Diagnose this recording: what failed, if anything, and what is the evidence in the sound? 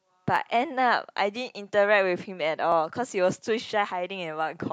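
The fault sits at the buffer between two devices, likely clock drift buffer slips: each side runs on its own clock, mismatched by roughly 500 ppm, so the buffer steadily drifts until a small block of a few tens of samples is dropped or repeated. In this speech clip that shows up as a regular click, about four in all, recurring every 1.19 s from 0.36 s to 3.91 s.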